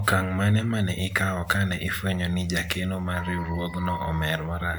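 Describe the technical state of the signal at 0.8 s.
At 0.8 s the speech signal is intact, with no dropout, distortion, glitch or other audible fault at that point.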